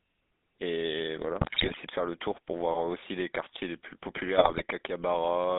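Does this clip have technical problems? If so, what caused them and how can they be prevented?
Yes. The whole speech clip has the buzzy, gravelly GSM full-rate codec sound: a pulse-driven vocal-tract model at what sounds like 13 kbps, squeezed into roughly 200 Hz to 3.7 kHz. Using a wideband codec or a higher-quality connection would avoid that. GSM bit errors hit from 1.40 to 1.78 s and from 4.38 to 4.62 s. Corrupted filter, pitch and gain values produce squawks and gargling, consistent with a few percent of bits flipped. A stronger signal or better error protection on the link would prevent them.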